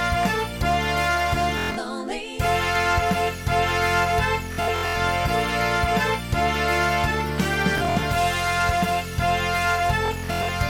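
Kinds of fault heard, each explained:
Bluetooth stutter: Packets arrive late or not at all, so the receiver keeps replaying its last short buffer, producing a rapid machine-gun repeat before the sound jumps ahead as if it had kept playing. Bursts occur at 1.58 to 1.78 s, 4.53 to 4.96 s, 7.78 to 8.03 s and 10.06 to 10.49 s, with about 140 to 300 ms lost per burst and the longest unbroken repeat reaching 116 ms, consistent with roughly 23 ms packets.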